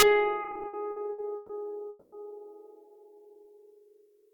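At 0.00 to 0.03 s, integer overflow: peaks driven about 4 dB past full scale wrap to the opposite sign, giving a violent crack far sharper than clipping's flattened distortion. From 0.43 to 1.51 s come repeated stalls (stutter): ten gaps, the longest 130 ms, filled with held-over music, about a third of the span, so it drags and stumbles without losing anything. At 1.89 to 2.14 s the music stops for 230 ms, continued as a fading buzz that never reaches silence, then resumes where it stopped. This single long hold, unlike the scattered stutters, is likely a call audio freeze from delayed packets. At 3.15 to 3.35 s, a jitter buffer slow-down repeats single pitch periods, adding 38 ms. The music runs at about 85% speed with the pitch unchanged, drawn out rather than halted.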